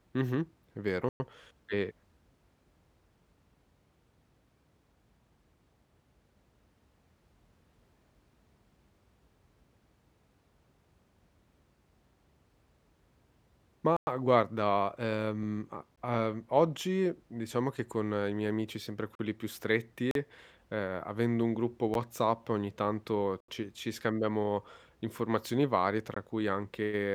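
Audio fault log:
1.09–1.20 s, 13.97–14.07 s, 15.96 s, 19.15–19.19 s, 20.11–20.15 s, 21.94 s, 23.40–23.48 s, 26.14 s: block of digital silence. The speech drops to silence and returns with no fade. The longer gaps of about 110, 105 and 80 ms sound like holes, the two 40 ms gaps like pops, and the sub-20 ms ones like ticks. The 11.6 ms gap fits a 512-sample buffer left unfilled. A dropout or gate would leave noise or fade in.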